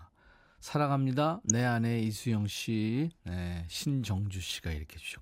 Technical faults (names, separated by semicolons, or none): DAB burbling